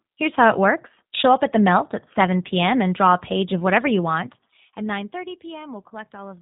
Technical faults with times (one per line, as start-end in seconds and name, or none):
0.00-6.41 G.729 codec